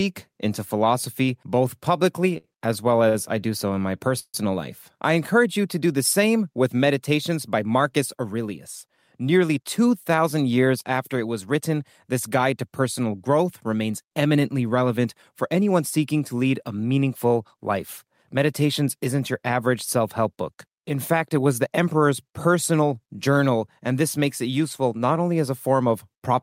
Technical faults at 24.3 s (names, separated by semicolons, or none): none